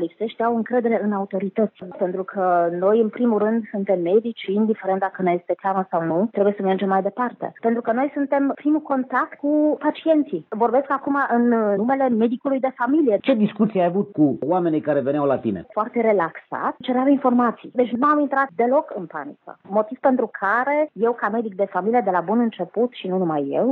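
No technical faults can be heard anywhere in the recording, and the signal stays intact and continuous throughout.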